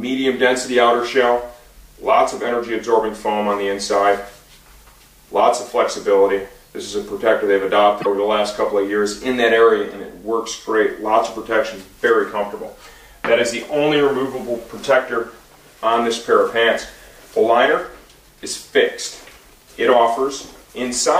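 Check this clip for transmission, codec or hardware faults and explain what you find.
One fault, from 8.01 to 8.06 s: a broken MP3 bit reservoir. Frames were likely cut from the stream, so the next 26.1 ms frames looked back for borrowed data and found another frame's bytes. The audio skips ahead, with a roughly two-frame disturbance at the join.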